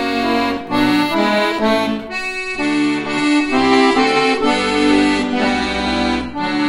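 Adaptive stream at a lower bitrate, from 2.37 s to the end: the audio switches abruptly, with no gap, to a coarser encoding. The stream's player evidently fetched a cheaper version when throughput fell, and the thinner result fits a step down from roughly 96 to 32 kbit/s AAC. Everything above 10.6 kHz vanishes, dulling the top end.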